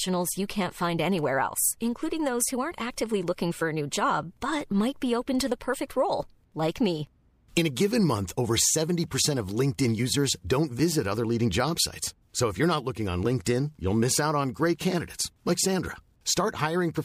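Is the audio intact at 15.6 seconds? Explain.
Yes, the speech at 15.6 seconds plays through intact, with no dropout, click, distortion or other fault at that moment.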